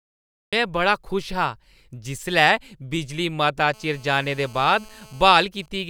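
The audio opens with a cut-off start. The recording began late, so there is flat digital silence until 0.53 s, when sound begins abruptly, mid-sound, just before "में बड़ा खुश". The waveform shows a flat line and then the signal at once with no rising attack, and the spectrogram shows a sharp vertical edge.

From 3.74 to 5.45 s, a GSM phone buzz sits under the speech. A nearby 2G phone on a call transmits bursts 217 times a second, and the audio circuit rectifies them into a hard, raspy 217 Hz buzz about 27 dB below the speech. On a spectrogram it appears as a steady comb of evenly spaced harmonic lines. The waveform carries a fine, regular pulse train.

From 5.56 to 5.80 s come GSM signalling bursts. The phone is still in the call while its user is silent, so it sends only short groups of bursts. These are heard as faint, even ticks with a longer 217 Hz buzz twice a second. The spectrogram shows short, broken stripes of the same harmonic comb.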